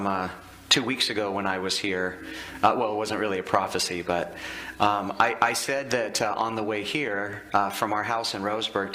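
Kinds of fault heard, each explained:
No audible faults detected.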